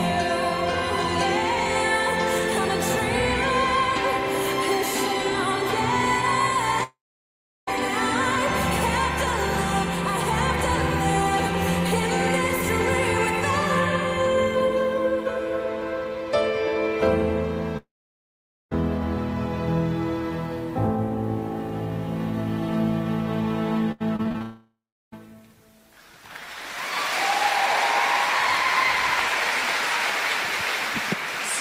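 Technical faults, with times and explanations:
6.83–7.69 s, long network dropout: the sound smears into a fading buzz, then about 0.71 s of near-silence follows. When it returns, roughly 0.84 s is simply missing. The likely cause is a stalled stream, with the receiver extending the last sound before giving up.
17.77–18.73 s, long network dropout: the sound again trails off into a decaying hiss, then goes quiet for about 0.84 s. Around 0.94 s of material never comes back, most likely because incoming audio stopped and concealment ran out.
23.92–24.42 s, repeated packet loss (robotic sound): the sound turns choppy, with six short holes, the longest 84 ms. About a third of this half-second is patched by stretching the preceding sound, so pieces vanish and artificial continuations take their place.
24.42–25.14 s, long network dropout: straight after the choppy stretch, the sound fades into a brief buzz and then about 0.35 s of silence. 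Roughly 0.70 s is lost for good, likely as the stream broke off entirely before recovering.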